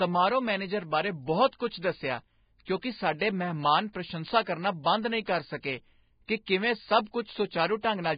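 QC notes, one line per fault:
throughout, Vorbis compression: speech sounds hissy and grainy, nothing above 4.9 kHz; likely heavy low-bitrate coding, around 16 kbps, quantising treble detail into noise.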